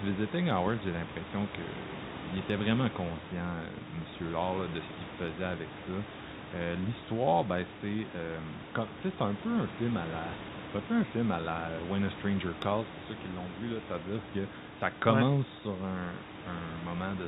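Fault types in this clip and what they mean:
There are no fault types in this clip.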